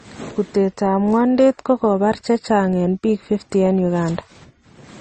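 Transcoding between lossy codecs runs through the whole speech clip. Nothing is left above 8.6 kHz, so the top end sounds dull and closed in. Smeared, swirly artefacts from one encoder sit alongside the different grain of another. The likely cause is a low-rate MP3 pass, around 32 kbit/s, later re-encoded as Opus at about 48 kbit/s. The second codec spent its bits on the first codec's damage while adding its own, and the first pass's band limit survived.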